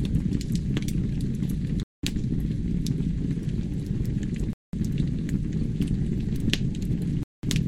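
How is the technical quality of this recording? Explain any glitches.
The recording of everyday sound is interrupted by a recurring gap between chunks, three times in all: 1.83 to 2.03 s, 4.53 to 4.73 s, and 7.23 to 7.43 s. Each hole lasts 200 ms and arrives every 2.7 s, which matches 2.5 s blocks of audio with 200 ms of silence inserted after each one, from padding or from playback starting each block late. No material is lost, but the sound is interrupted by a short hole or dip at every join.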